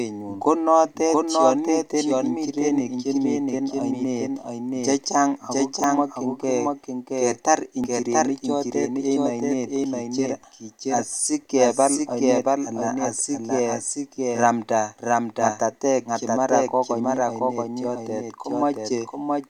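From the start to the end, the speech is heard twice. A doubled audio track runs through the whole clip. A second, full-band copy trails the original by roughly 0.7 s, at about the same level. It has no reverb tail or room colour, so it sounds like a clean echo of each phrase. The likely cause is a second capture path or an edit that left two copies out of step.

From 5.84 s to 10.84 s there are periodic USB or driver dropouts. They begin after "oinet chechang ak ko" and stop before "asikebal oinet alaa asikeramnda". Something stalls the audio path about once every second. Each time, around a millisecond of sound is skipped. That gives around seven short, evenly spaced ticks, heard only where the speech is present.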